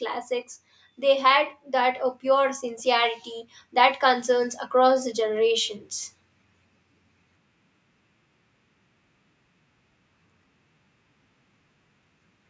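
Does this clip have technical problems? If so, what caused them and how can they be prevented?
Yes. Automatic gain rising from 1.0 to 5.79 s: the gain control judged the input too quiet and lifted level by about 8 dB, swelling voice and background together. Prevent it by setting adequate input gain or disabling automatic gain control.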